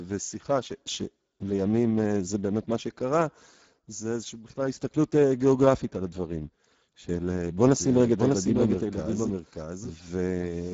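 From the start the speech carries Speex codec damage: a hoarse, noisy buzz on every sound, which points to a low bitrate near 10 kbps. A spectrogram shows nothing above 7.7 kHz, with smeared, grainy harmonics.

At 7.80 s a doubled audio track cuts in abruptly and runs to the end. A second full-band copy trails about 0.7 s behind, around 5 dB quieter and dry, likely captured a second time along a slower path. The waveform shows each burst repeated as a smaller, offset twin.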